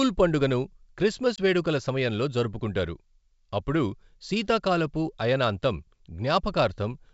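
At 1.36 to 1.39 s there's packet loss on an ADPCM call: about 20 ms, roughly one packet, drops to a hard-edged silence. The decoder's predictor and step size lose sync with the sender's, so "వేడుకల సమయంలో జరుపుకుంటారు" comes back briefly rough before settling, under the G.722 wideband coding.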